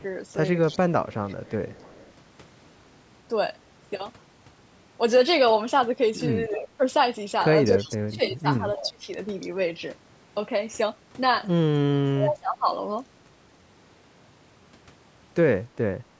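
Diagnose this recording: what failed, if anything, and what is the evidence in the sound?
Echo leak, at the call-processing stage: a faint delayed copy of the talker returns at 0.63–0.79 s, 1.12–2.12 s, 7.75–7.88 s, 8.77–8.89 s and 9.41–9.49 s, trailing the original by about 0.29 s and sitting about 15 to 25 dB below it. On a spectrogram these appear as weak, shifted ghosts of the speech harmonics; the waveform shows small bursts in what should be gaps. The likely cause is an echo canceller on a loudspeaker end leaving residual echo.

Speech suppressed in double talk, also in call processing: the talker's level sags at 6.48–6.81 s by about 15 dB, then drops far harder, about 30 dB, across 7.68–9.08 s and 11.89–12.68 s. On the waveform the envelope collapses in chunks, and the spectrogram shows the speech energy thinning or vanishing in blocks. This is likely an echo canceller mistaking both sides for echo while they overlap and turning everything down.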